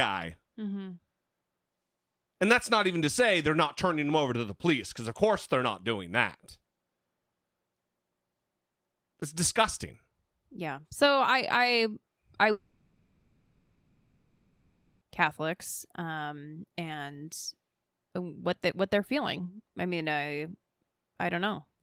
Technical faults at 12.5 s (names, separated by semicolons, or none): long network dropout